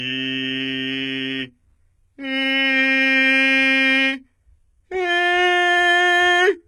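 Throughout the music, nothing sounds above 11.6 kHz. This is likely low-bitrate audio saved at a high bitrate, so the earlier codec's losses remain.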